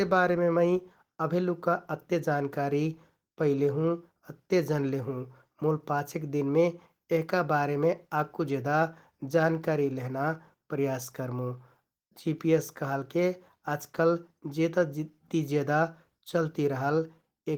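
No technical faults are audible.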